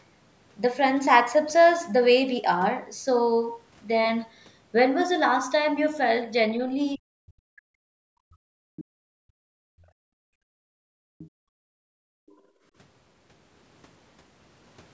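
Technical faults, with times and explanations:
6.94–8.21 s, speech suppressed in double talk: The talker's speech sinks by as much as about 40 dB for roughly a second and a half. This is likely the echo canceller mistaking overlapping talk for loudspeaker echo and turning down everything.
8.49–12.64 s, background gated by the echo canceller: The room sound drops away, at its deepest by about 34 dB, for around four seconds in total, then returns. The canceller is clamping the microphone while the loudspeaker plays. A spectrogram shows the noise floor blanking into dark gaps with abrupt edges.
8.76–8.84 s, 11.18–11.30 s, 12.27–12.37 s, other side's voice leaking through: Brief scraps of a second voice, each about a tenth of a second long, come through at about 20, 25 and 35 dB below the talker, fading with each occurrence. They are likely loudspeaker echo the canceller failed to remove. On a spectrogram they show as faint harmonic smudges inside the gated stretches, all below the 8 kHz ceiling set by the call processing.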